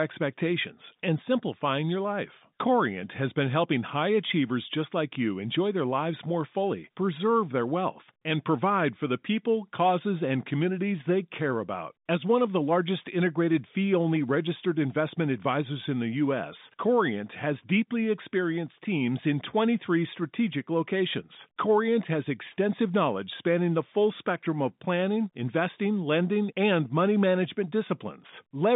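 Listening to this speech recording over its telephone-band channel, which carries nothing above about 3.8 kHz, nothing stood out as a fault.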